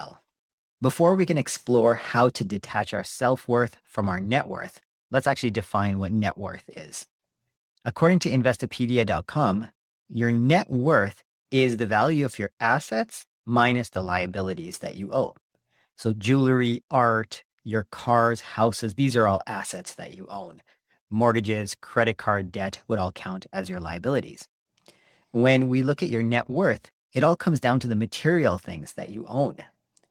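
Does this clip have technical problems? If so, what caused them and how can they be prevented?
No, no technical problems can be heard in this recording.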